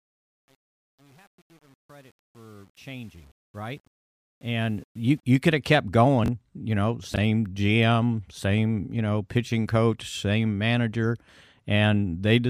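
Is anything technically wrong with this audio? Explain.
Yes, there are two faults in this speech clip.

Truncation distortion on a fade runs from the start to about 5.23 s, through the fade-in, and is worst up to about 4.41 s. The gain stage keeps only about 9 bits and adds no dither, so the quiet part of the fade is forced onto a few coarse steps. It sounds gritty. The waveform shows staircase steps, and the spectrogram shows broadband hash tracking the signal.

Chunks out of order occur twice, at 6.24 to 6.28 s and at 7.14 to 7.18 s. Each time, a 20 ms chunk plays one chunk late, swapped with its neighbour. No audio is lost, but the sequence is scrambled, leaving hard joins. Each event sounds like a brief jumbled stutter. On the waveform, the joins show as abrupt discontinuities. On the spectrogram, they appear as thin vertical broadband lines with a small shuffled block between them.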